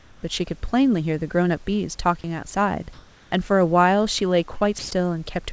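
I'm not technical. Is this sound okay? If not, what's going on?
No, there are a few small glitches, all typical of audio that went through an internet call.

At the very start, from 0 to 0.23 s, and again from 2.93 to 3.32 s, you're hearing comfort noise in place of the background. During those quiet moments the sending end likely stopped transmitting because it detected no one talking, so the receiving end filled the gap with a bland, made-up hiss. It's roughly as loud as the real room sound, but smoother and flatter.

Around 4.58 to 4.64 s there's a short concealed packet loss. About three hundredths of a second of audio didn't arrive in time, so the receiver papered over the gap by stretching out the sound it had just played, then blended back into the real audio. You might hear it as a tiny smear or wobble rather than a clean gap.

Right after that, from 4.79 to 4.91 s, there's sound dropped by the voice detector. 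The sender's speech detector likely mistook part of the talking for background and stopped sending, so roughly a tenth of a second of actual speech is missing. Filler noise takes its place until the detector picks the voice up again.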